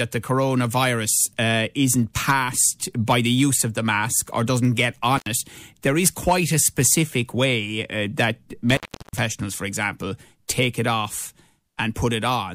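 An intermittent contact, a loose cable or plug briefly opening the line, breaks the speech twice: at 5.17 to 5.27 s, open for about 81 ms, and at 8.70 to 9.19 s, open for about 361 ms. Each time the sound drops out or breaks up, with crackle at the edges.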